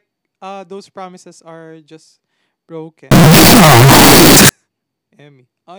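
From 3.11 s to 4.49 s the speech turns into a blast of very loud, harsh distortion, with the quiet moments just as loud as the rest. The likely cause is signed and unsigned mixed up: the 16-bit samples are read with the wrong sign convention, flipping the top bit, so every time the waveform crosses zero it jumps across the whole range. Low-level sound becomes as loud as the strong parts, which is why nothing in that stretch stays quiet.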